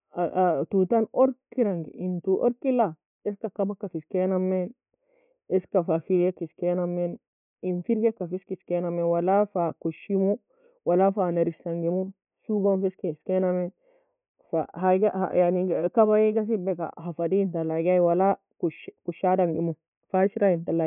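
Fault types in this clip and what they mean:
No fault types are present in this clip.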